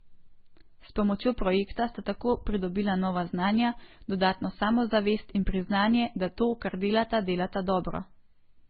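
Speech, with layered codec damage throughout. Nothing is heard above 4.8 kHz. The artefacts of two different codecs are heard together. That mix likely comes from transcoding between lossy codecs, pointing to a low-rate MP3 re-encoded as Opus.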